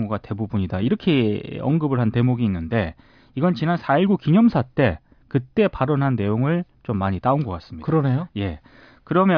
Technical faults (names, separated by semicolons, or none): none